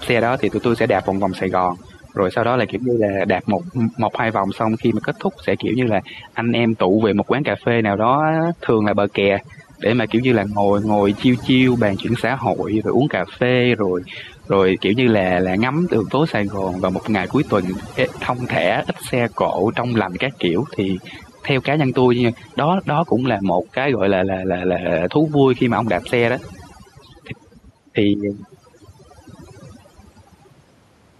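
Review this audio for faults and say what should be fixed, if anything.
Overdone noise removal, throughout: the reduction is set so strong that bands near its noise estimate are cut away, leaving speech over near-silence with twinkling specks. Prevent it by backing the reduction amount off until the background stays smooth and the speech keeps its body.

Gain pumping, throughout: the gain is pulled down by roughly 5 dB under loud syllables, likely from excessive input gain driving a fast limiter or compressor. Prevent it by lowering the microphone gain so peaks sit below the limiter's threshold.

The room noise itself sits about 38 dB below the speech.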